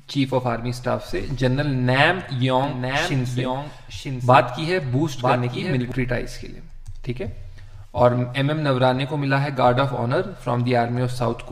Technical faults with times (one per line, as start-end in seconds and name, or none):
2.64-5.92 doubled audio track